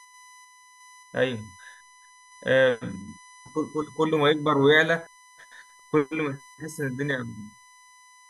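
The clip is speech with USB whine running throughout. A steady, fixed-pitch tone sits at 1 kHz, and that is also where it is strongest. It stays roughly 30 dB below the speech. The cause is the USB bus drawing current in regular 1 ms frames. That pulsing load leaks into the audio through shared power or ground, producing a whine at the frame rate.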